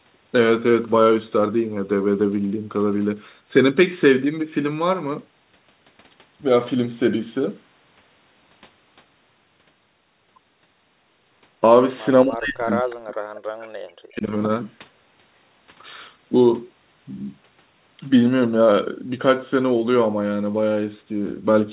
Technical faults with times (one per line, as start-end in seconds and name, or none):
12.24-14.32 speech suppressed in double talk
12.90-12.95 echo leak